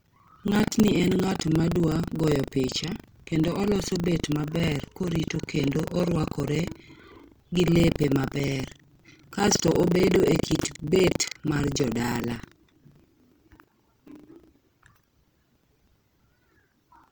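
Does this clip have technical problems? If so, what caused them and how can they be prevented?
Yes. The speech carries two faults that run through the whole clip.

Throughout, the speech sounds grainy and rough, with a noisy texture where tones should be clean. This is likely Opus compression in its music mode at a low bitrate, around 24 kbps. When bits run short, that mode refills bands with folded or noise content instead of leaving gaps. That is why this sounds gritty rather than showing the swirling, watery holes of MP3. The bandwidth stays full, so there is no muffling. Prevent it by encoding at a higher bitrate or sending speech through Opus's speech-tuned settings.

Also throughout, a steady robotic buzz at 25 Hz rides on the speech and vanishes in the pauses. This is buffer tearing. The writing program and the playback hardware have slipped, so every 40 ms period a small slice, about a seventh of it, replays audio from roughly 70 ms earlier, with hard joins at both ends. 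Unlike dropouts or random clicks, the rattle is perfectly regular and follows the signal. Prevent it by keeping the buffer writer synchronised with the hardware read pointer, with enough margin that they never cross.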